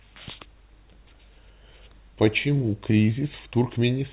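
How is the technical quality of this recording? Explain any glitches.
No glitches turn up anywhere in the recording, and the speech carries the band-limited character of a call path with nothing above 4 kHz, which fits a G.711 mu-law narrowband codec.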